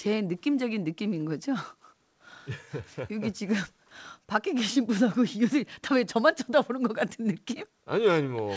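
There are no technical faults in this speech clip; it has passed through a G.722 call path at 64 kbps, which leaves nothing above 8 kHz.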